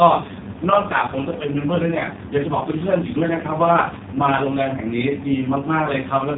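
From start to finish the speech has gone through the AMR narrowband mobile codec. Nothing gets past about 3.8 kHz, and the heavy buzzy, synthetic coloring points to the codec's lowest mode, around 4.75 kbps, where too few pulses per frame are left to model the voice.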